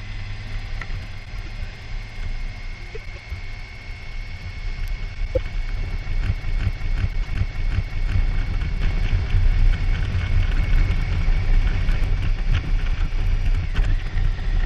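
Neighbouring runs of frames arrived and were decoded in swapped order, so at 1.25, 2.95, 5.14 and 7.13 s a stretch of about 0.23 s plays with its 104.5 ms halves exchanged, a garbled flutter. From 6.32 to 8.17 s a system hang loop sets in: the machine froze while the sound hardware kept cycling one buffer, so a 372 ms piece repeats five times at 2.69 Hz, like a skipping record, which fits a 16384-sample buffer. From 8.82 to 12.04 s a doubled audio track is heard, a full-band copy at roughly equal level trailing by about 200 ms, likely from a second, slower capture path, starting and stopping abruptly with no room decay.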